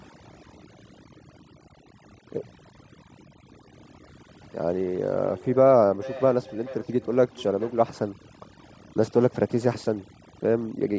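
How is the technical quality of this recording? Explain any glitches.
The recording has two clear faults: heavy-handed noise suppression throughout, and a feedback echo in the middle section.

Overdone noise removal runs through the whole clip. The suppressor pushed individual frequency bands down or shut them off whenever they sat close to its noise estimate, taking the softer parts of the speech along with the hiss. The pauses drop to near silence sprinkled with twinkling specks. On a spectrogram the gaps look almost black with isolated dots, and the speech harmonics appear patchy and torn at their edges.

Feedback echo between two devices appears from 5.23 to 7.85 s. A second device in the same room was on the call and replayed what the first microphone sent. That microphone picked the sound up again, and its echo canceller could not remove audio played by a different device. The speech comes back roughly every 0.4 s, peaking at about 17 dB below the direct voice, thinner and more ringing with each pass. 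The waveform shows trailing copies at evenly spaced intervals, and the spectrogram shows faint repeated smears of each syllable. The audio band stops at 8 kHz, which fits normal call processing.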